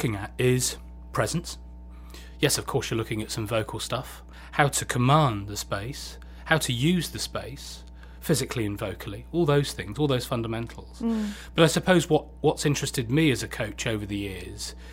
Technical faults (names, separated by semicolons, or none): mains hum